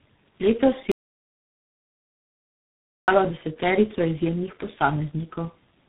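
From the first moment to the last, the speech carries tandem speech coding. The sound is rougher, more muffled and more warbly than a single narrowband codec would leave it, which points to about three speech codecs in a row, such as GSM full rate, G.723.1 and G.726, with plain telephone-grade links between them. Each coder re-encodes the previous one's damage, so the errors stack. Nothing remains above 3.8 kHz, but band-limiting alone would not produce this layered gargle.

At 0.92 s the audio drops out to silence, and it resumes at 3.08 s, roughly 2.16 s later. The input was likely lost through a failed link or a disconnected device while recording carried on writing silence. Unlike packet-loss concealment or a noise gate, the gap holds no smeared fill and no residual room tone. It is plain silence with abrupt edges, and whatever was said in that stretch is gone.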